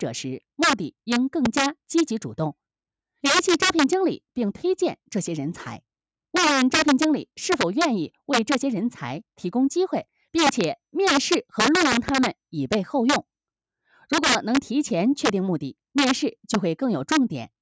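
Integer overflow runs through the whole clip. The signal is driven about 9 dB past the largest value the integer format can hold, and instead of being limited, each sample over the top wraps around to the opposite extreme. Only a small fraction of samples exceed the limit, but every one swings across the full range. The result is violent, harsh cracks on the loudest moments, far sharper and uglier than ordinary clipping, sitting on top of audio that the call's microphone processing has already band-limited to nothing above 8 kHz.

A loud pop appears at 1.45 to 1.48 s as a single sharp hit. It is likely caused by a sudden voltage step or pulse, from a plug, switch, static discharge or driver glitch, entering the signal chain. It peaks well above the surrounding sound while the audio carries on underneath. A second loud pop event at 11.92 to 12.11 s arrives as two pops in quick succession, again sharp and much louder than the material around it.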